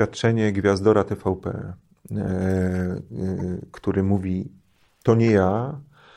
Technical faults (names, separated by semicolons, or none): corrupt frame decoded